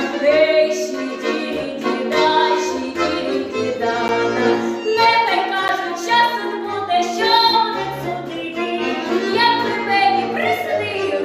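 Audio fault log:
4.08 s and 5.68 s: block of digital silence. Each time, the sound drops to silence for about 10 ms and jumps straight back with no fade. The hole is so short that each one comes across as a single tick.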